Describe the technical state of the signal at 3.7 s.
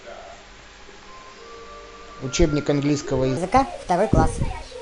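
At 3.7 s you're inside a section at the wrong speed, running from 3.37 s to 4.81 s. The speech plays 1.35 times too fast, so it sounds hurried and sits roughly five semitones high, likely because that stretch was played against the wrong clock.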